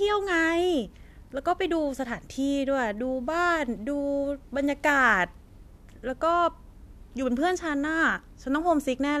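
No technical faults are audible at any point in the speech.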